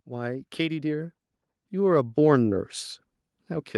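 From 0.08 s to 2.78 s, automatic gain rising lifts the level steadily. The gain control judged the input too quiet and kept turning it up. It climbs about 10 dB over nearly three seconds. The speech and the background swell together.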